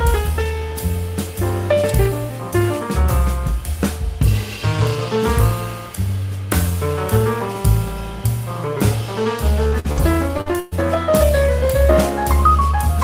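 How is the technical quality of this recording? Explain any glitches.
The clip has one clear glitch: repeated packet loss (robotic sound) between 9.67 and 10.74 s. Over that stretch the stream dropped out five times in quick succession, the longest gap lasting 115 ms. Each hole was patched by extending the preceding sound, which covered about 28% of the span and left other pieces simply missing, with only around 70 ms roughly rebuilt. The result is a choppy, stuttering texture for about a second.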